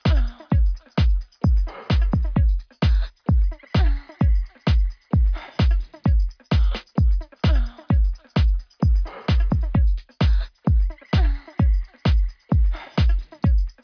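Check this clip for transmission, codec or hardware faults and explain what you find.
No transmission, codec or hardware faults can be heard anywhere in the recording, and the signal stays steady and continuous throughout.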